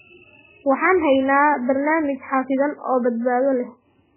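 Throughout, MP3 compression, likely at a starved bitrate near 8 kbps, removes everything above 3.1 kHz, leaving the speech dull, heavily watery and swirling.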